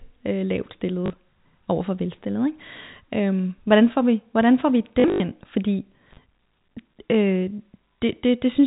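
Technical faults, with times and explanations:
1.06–1.1 s, packet loss with last packet repeated: after "øh lavt", 40 ms missing, filled by repeating the prior packet twice, giving a robotic stutter before "over for".
5.0–5.2 s, packet loss with last packet repeated: after "vi hvordan får vi", 140 ms lost across 200 ms, longest run 80 ms; repeats briefly buzz, fitting 20 ms packets.
6.11 s, intermittent contact: sound drops out for about 40 ms with crackle at both edges, as a loose connection opens momentarily, leaving faint hiss.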